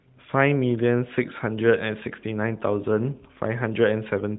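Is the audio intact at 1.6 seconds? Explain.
Yes, at 1.6 seconds the speech is intact, carried through the AMR narrowband mobile codec at a rate that fits 12.2 kbps with only light codec colouring and no fault.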